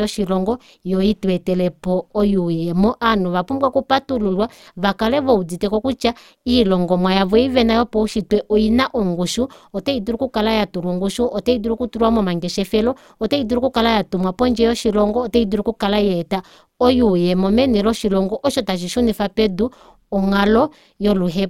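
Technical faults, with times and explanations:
Throughout, overlap-add ripple: the speech was split into windowed frames and rejoined with an overlap that doesn't sum to a steady gain, so the level dips and swells by about 6 dB once per frame, around 150 times a second, giving a metallic buzz with extra tones around the voice.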